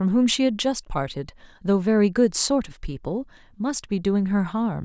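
Nothing here trips up the ear at any point in this bit of speech, so there's no technical fault to point to.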